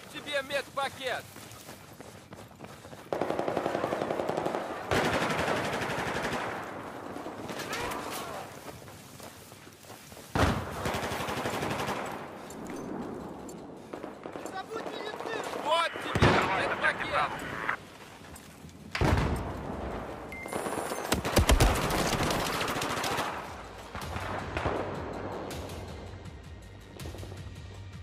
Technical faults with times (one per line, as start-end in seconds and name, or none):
none